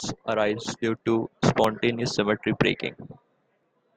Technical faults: audio missing between chunks

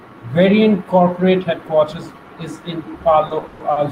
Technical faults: repeated stalls (stutter)

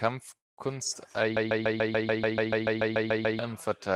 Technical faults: call audio freeze; broken-record loop

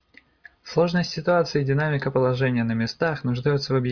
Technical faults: none

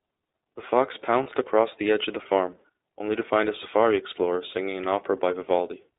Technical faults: iLBC codec; lost iLBC frames

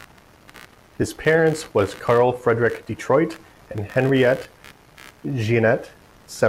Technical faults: computer activity noise

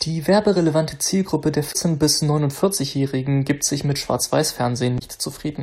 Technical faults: damaged data in a compressed stream

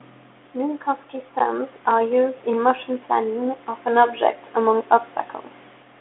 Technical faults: none

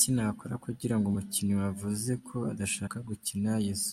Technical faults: compressed frames skipped

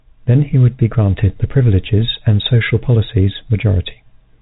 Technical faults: none

